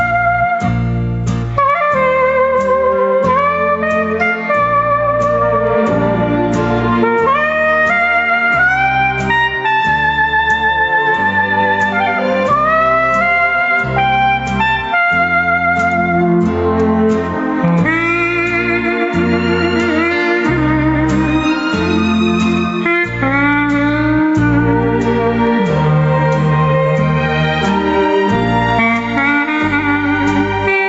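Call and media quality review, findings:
Gain pumping throughout: swing around 15 dB; waveform envelope breathing; likely excessive mic gain hitting a fast limiter. Band tops out near 8 kHz.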